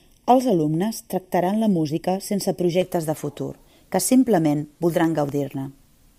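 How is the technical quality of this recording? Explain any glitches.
The recording has two distinct technical faults, one in the opening and one near the end.

From the start to 2.82 s the speech sounds hollow and phasey, with a fixed dip in the spectrum around 1.5 kHz. This is channel delay (comb filtering): one channel lags by roughly 0.4 ms, and when the two are summed to mono, shared content cancels at evenly spaced frequencies.

Between 5.04 s and 6.04 s, about five ticks land every 0.25 s while speech continues. These are periodic USB or driver dropouts: a background task stalls the audio path at a fixed interval, and each stall replaces a fraction of a millisecond of signal with silence.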